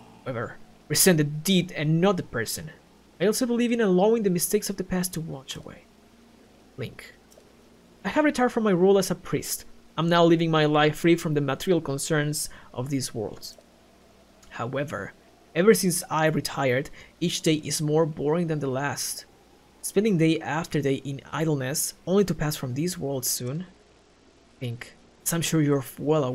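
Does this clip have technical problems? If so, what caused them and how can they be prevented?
Yes. From 23.37 to 25.20 s there is a Bluetooth SBC bit pool drop: the treble dulls and gritty noise rises, consistent with the bit pool falling from around 31 to 12, near 88 kbps. Unlike packet loss, the sound never drops out; it only coarsens, then recovers. Keeping the phone close to the receiver with fewer competing 2.4 GHz devices prevents the congestion that forces the bit pool down.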